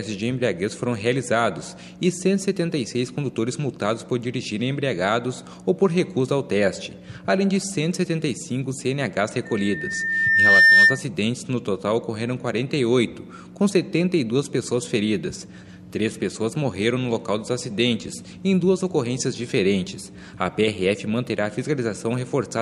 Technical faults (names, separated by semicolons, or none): loudspeaker feedback squeal